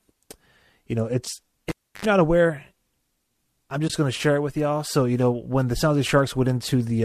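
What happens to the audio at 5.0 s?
Nothing breaks at 5.0 s: the speech runs through intact, with only the light, steady texture of what is likely low-delay AAC compression that sits under the whole recording.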